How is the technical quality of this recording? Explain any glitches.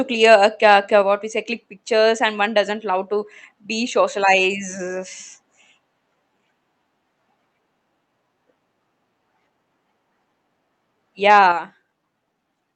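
Two glitches occur near the end, both around 11.3 to 11.5 s.

From 11.29 to 11.40 s there is microphone overload. The peaks run about 3 dB past the converter's ceiling and lose their tops. A small share of samples is flattened. The loudest syllables gain a harsh, crackling edge. The likely cause is an input level set too high.

At 11.52 s the microphone volume steps down. Voice and background drop together by about 6 dB in one abrupt step, just after the distorted peak. This likely comes from call software lowering the device's input gain once it detected clipping.

The audio also passes through a call path and is band-limited at 8 kHz. That fits Opus at around 32 kbps.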